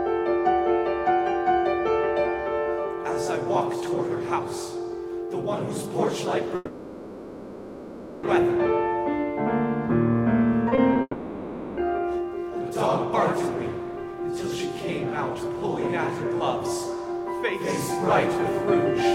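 From 6.55 to 8.25 s the sound turns into a fading buzz. This is likely a long network dropout, with about 1.7 s lost. At 10.69–10.73, 10.75–10.79 and 10.93–10.97 s there is short concealed packet loss. Each 20 ms gap is filled by stretching the last sound, heard as a brief smear or wobble. From 11.01 to 11.79 s the sound fades again, with about 30 ms of near-silence. This is likely a second long network dropout.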